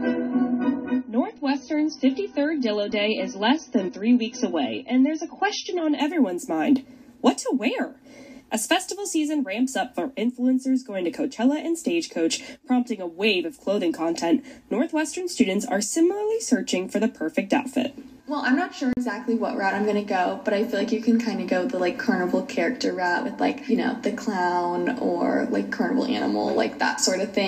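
From the start to 6.0 s the audio plays as an adaptive stream starting at a low bitrate. Nothing is present above 6.3 kHz, so the sound is dull and codec smearing is stronger. That fits a player opening on a low-bitrate AAC rendition of roughly 27 kbit/s while it measured the connection. At 6.0 s it jumps without a gap to a fuller version, consistent with about 96 kbit/s. On a spectrogram the top edge sits flat at 6.3 kHz and then rises abruptly.

From 18.93 to 18.97 s there is a block of digital silence 40 ms long. The signal drops straight to silence and returns with no fade, and the middle is heard as a brief hole. This points to the output buffer not being filled in time. On the waveform it appears as a flat line with vertical cuts at both ends, and a spectrogram shows a clean blank strip.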